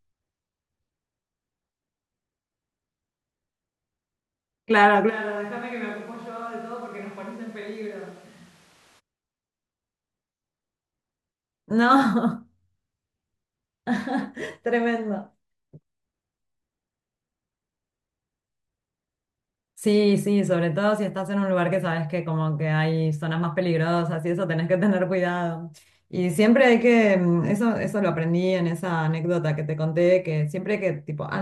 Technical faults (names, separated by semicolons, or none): switch to a distant microphone